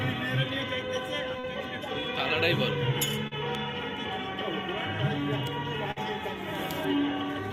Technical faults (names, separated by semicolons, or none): short concealed packet loss; burst of packet loss